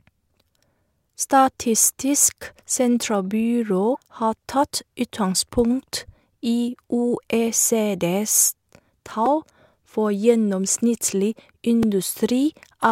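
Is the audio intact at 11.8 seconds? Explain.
No. At 11.83 s, just after "for gjennomsnittlig", a repeated buffer replays a 2.67 ms piece, fitting a 128-sample buffer, causing a click rather than a silent dropout.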